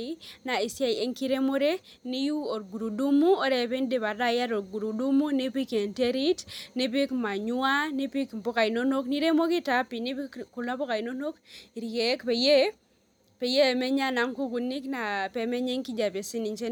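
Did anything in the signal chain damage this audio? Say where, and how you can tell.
No, nothing in the signal chain audibly damages this speech recording. No stage between capture and playback leaves any mark a careful listener can point to at any moment in the clip.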